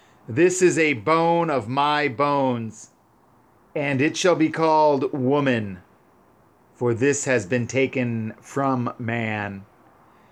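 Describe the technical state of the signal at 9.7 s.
At 9.7 s the signal is intact, with no audible fault at that moment.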